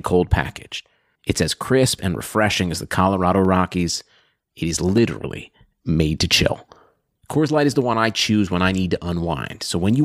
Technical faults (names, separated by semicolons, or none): dropped samples